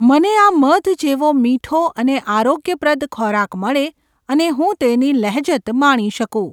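Listening through this speech recording, nothing stood out as a technical problem at any point.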